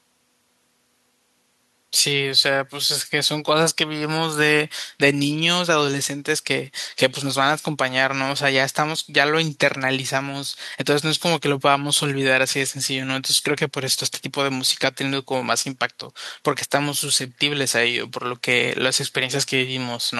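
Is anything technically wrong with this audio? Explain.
No, nothing is technically wrong with this recording of speech. No faults show up anywhere in it.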